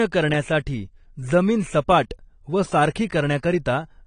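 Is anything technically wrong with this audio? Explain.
Yes, there is AAC compression damage throughout the speech, likely from low-bitrate AAC-LC encoding, which would fit roughly 32 kbps. Everything above 10 kHz is gone, so it sounds dull, with fizzy, warbling sibilants. A spectrogram shows a hard ceiling at 10 kHz.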